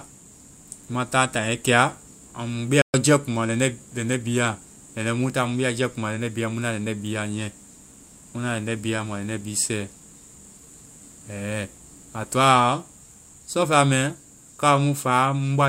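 At 2.82 s the speech halts mid-flow and the output falls fully silent for about 121 ms, until 2.94 s, before carrying on. This is a playback stall, likely caused by the player running short of data or its output thread being blocked. Unlike a dropout from lost packets, where a piece of the sound is simply missing or smeared over, the sound here pauses cleanly and then continues.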